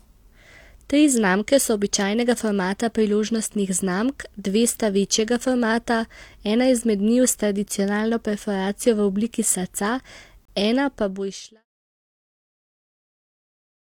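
A gap between stream segments falls at 10.45 to 10.48 s, just before "ena pa". The timestamps of two adjacent segments, consistent with 6-second segments, leave a 31.5 ms hole that the player fills with silence. The result is a brief, hard-edged dropout with no audio lost, just ahead of the fade-out that ends at 11.66 s.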